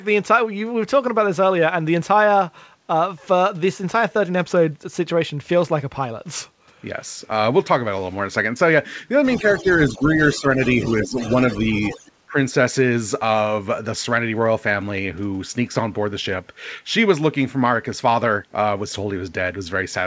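From 9.24 to 12.09 s, a second voice, the other side's voice leaking through, sits about 20 dB under the main talker. It is likely residual loudspeaker echo the canceller missed. Unlike background chatter, it is faint and tied to the call's far end.

While that echo overlaps the talker, speech suppressed in double talk follows. The main voice dips by a few dB from 9.37 to 10.04 s, by roughly 10 dB at 10.36 to 10.59 s and at 11.03 to 11.17 s, and by about 20 dB at 12.04 to 12.37 s. The likely cause is the canceller clamping both signals. These are brief level losses, not dropouts to silence. Throughout, the G.722 call path leaves nothing above 8 kHz.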